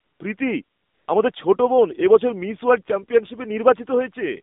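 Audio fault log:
Throughout, AMR narrowband mobile codec: the speech has been squeezed down to AMR-NB at 7.4 kbps, so everything sits in roughly a 200 Hz to 3.7 kHz phone band with nothing up top. At that low rate the vocal-tract model gets only a handful of pulses per 5 ms subframe to work with, and you can plainly hear it: the voice comes out buzzy and a bit synthetic, with a thin, boxy edge to it.
0.00 to 0.20 s, 0.64 to 1.08 s, and 1.32 s, AMR comfort noise: in these gaps the phone decided nobody was talking and stopped sending speech frames, so the receiver filled in with smooth, steady generated noise built from a rough level-and-spectrum sketch. The first patch comes just before "প্রীতি আমাদের ছোট বোন". The longest, about 440 ms, leads into "আমাদের ছোট বোন এ". The last is a 20 ms blip between "প্রীতি আমাদের" and "ছোট বোন এ বছর". The background switches in and out with an artificial evenness.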